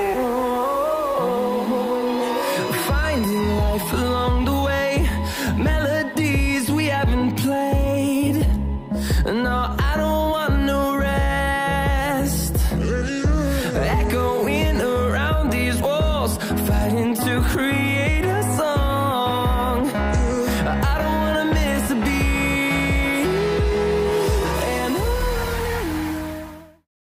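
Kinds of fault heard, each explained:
Nothing here to flag: the audio runs along without a hitch and simply eases gently down to quiet in its last second or so.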